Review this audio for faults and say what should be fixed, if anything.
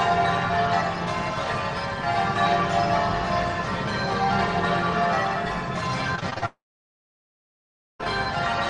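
From 6.15 to 6.44 s there is repeated packet loss (robotic sound): about six short holes, the longest 36 ms, each patched by stretching the preceding sound, so roughly 44% of that span is synthetic fill. Unlike a dropout, real audio keeps returning between holes, giving a choppy texture. A larger jitter buffer and forward error correction on the link would prevent it.

Then, from 6.46 to 8.01 s, comes a long network dropout, likely from the connection stalling outright. The last sound is carried briefly as a fading buzz, then about 1.4 s of near silence follows, and the audio resumes with roughly 1.5 s simply gone. Nothing real returns mid-gap, which separates it from packet-loss chop. A more stable network path, or redundancy that can resend lost stretches, would prevent it.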